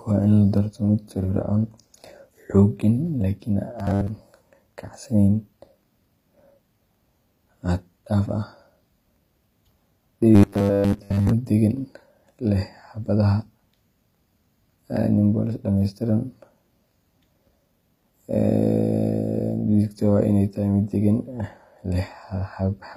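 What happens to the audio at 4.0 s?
Between 3.79 and 4.09 s, new audio likely arrived too seldom, so the playback kept repeating a short buffer of about 10 ms while the real signal was skipped. This is robotic sound from repeated short buffers: most of that stretch becomes a rigid 100 Hz buzz that only loosely tracks the speech.

Underneath, the whole clip carries plainly audible damage from what is likely HE-AAC compression, fitting a low bitrate of around 24 kbps. The treble is rebuilt from copied lower bands rather than coded, and nothing survives above 15.4 kHz.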